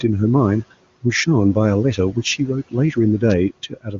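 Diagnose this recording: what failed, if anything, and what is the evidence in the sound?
Speech cut by the noise suppressor, from 3.7 s to the end at 3.99 s: about a fifth of a second of the final speech drops by up to about 18 dB and sounds swallowed. The call-processing suppressor treated this quiet tail as background, which sits about 22 dB below speech.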